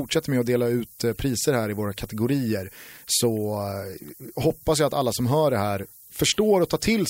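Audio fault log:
throughout low bit depth with noise shaping: speech quantised to about 7 bits, rounding error pushed upward, giving a steady thin hiss rising toward the top, roughly 20 dB below the signal.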